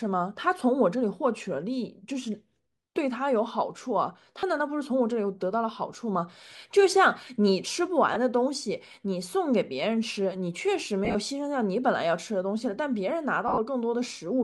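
Lost LE Audio frames at 4.40 to 4.43 s (30 ms), 8.14 to 8.16 s (20 ms), 11.05 to 11.15 s and 13.48 to 13.58 s. In the last two, losses are scattered over about 100 ms, with runs of roughly 40 and 50 ms. The decoder repeats the last spectrum with random signs, so speech turns into a brief noisy smear. On a spectrogram, harmonics blur into broadband patches.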